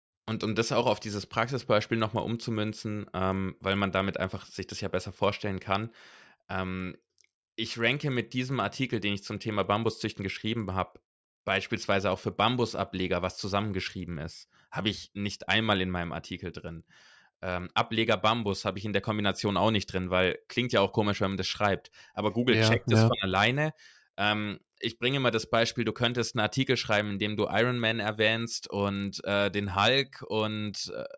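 Throughout, a resampler restarted on every block marks each 40 ms block edge, giving a 25 Hz buzz that, unlike hum, vanishes in pauses.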